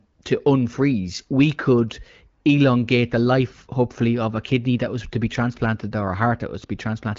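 Nothing stood out on listening to this speech clip.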